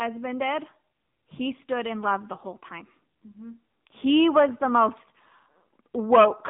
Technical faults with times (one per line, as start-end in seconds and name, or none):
0.00-6.49 AMR narrowband mobile codec